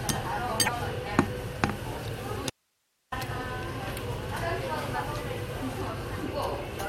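At 0.64 to 0.69 s there's a short glitch, classic damaged data in a compressed stream. A bit of the encoded stream got corrupted, so the decoder misread those frames, lost sync and had to hunt for the next valid frame header. You hear a brief glitch. The same thing happens again right near the end, at 6.75 to 6.79 s, with the same kind of quick glitch.

In between, from 2.50 to 3.12 s, the sound cuts out abruptly for about 0.62 s and comes back just as suddenly. This is an audio dropout to a faint residue. The gap isn't silent. It holds only hiss, about 45 dB below the normal level. That likely means the signal feeding the chain was lost while everything downstream stayed live and kept passing its own noise. It's a hard cut, not a pause or fade.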